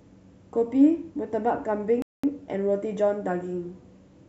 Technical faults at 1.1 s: none

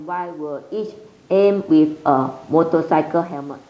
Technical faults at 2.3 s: automatic gain rising

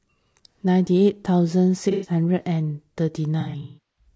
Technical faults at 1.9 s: low-delay AAC compression; AAC frame loss with concealment

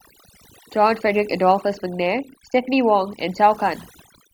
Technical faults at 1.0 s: overdone noise removal

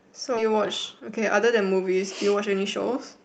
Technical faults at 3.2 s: jitter buffer speed-up

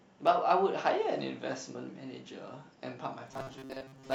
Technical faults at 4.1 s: robotic sound from repeated short buffers

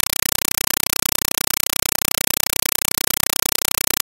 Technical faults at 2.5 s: compressed stream played as audio

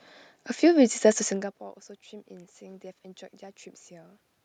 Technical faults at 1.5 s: none

